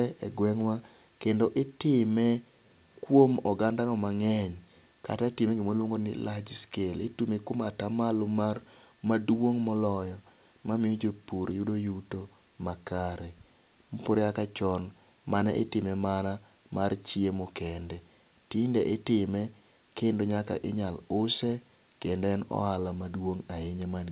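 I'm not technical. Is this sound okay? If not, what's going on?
Yes, nothing has gone wrong with this speech recording. It has the narrower sound of a phone line because it went through a call connection that keeps nothing above 4 kHz.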